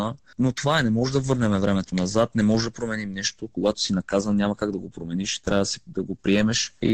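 No technical faults can be heard anywhere in the audio, which holds steady throughout with nothing breaking into or distorting the signal.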